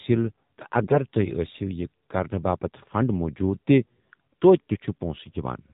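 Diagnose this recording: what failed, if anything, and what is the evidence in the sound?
The speech sounds boxed-in and buzzy for the whole clip, with nothing bright above the telephone band and a plainly audible synthetic, reedy edge on the voice. That points to the codec stage: AMR narrowband mobile codec (AMR-NB) coding. At 8 kHz sampling nothing above 4 kHz survives, and the voice is rebuilt from a vocal-tract model excited by a few pulses per subframe. The level of buzziness fits one of its lower modes, around 7.4 kbps.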